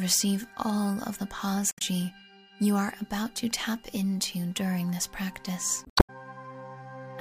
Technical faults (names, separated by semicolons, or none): damaged data in a compressed stream